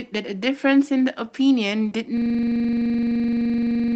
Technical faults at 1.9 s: lost packet rebuilt from error correction; short concealed packet loss

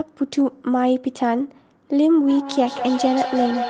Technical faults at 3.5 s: feedback howl

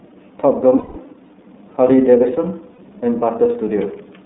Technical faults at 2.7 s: iLBC codec; lost iLBC frames

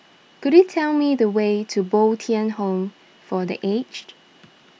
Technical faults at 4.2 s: none

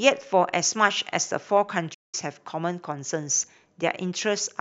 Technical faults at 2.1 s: playback stall

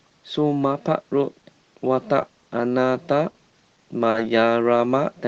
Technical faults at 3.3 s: short stall from a late packet

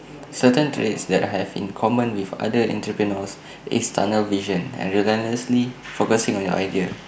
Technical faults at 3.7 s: none

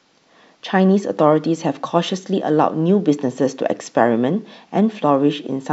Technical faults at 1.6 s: none

